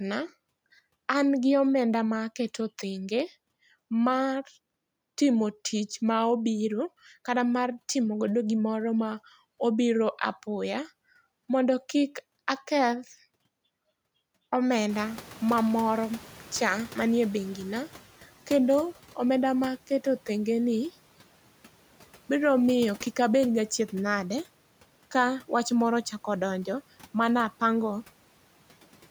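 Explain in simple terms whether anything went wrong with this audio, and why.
Yes, something slips here: at about 14.89 s the background noise in the room jumps up, and the noise suppressor takes a while to react. For roughly the next three seconds, until about 18.03 s, that noise comes through louder behind the speech, then gradually fades as the suppressor works out the new noise level and starts cutting it back. That's the noise suppressor catching up, a short lag after a sudden change in the room.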